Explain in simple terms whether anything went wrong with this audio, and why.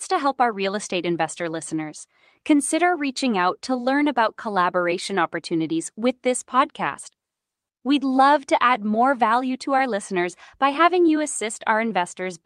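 Nothing went wrong here.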